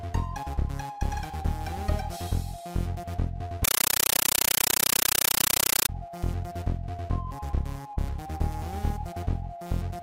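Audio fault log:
3.64 to 5.89 s, compressed stream played as audio: the sound is replaced by very loud, chattering static, bursts of noise about 9.3 ms long repeating 31.25 times a second with silence between. An AC-3 stream, which fits 448 kbps, is being played as raw samples instead of decoded.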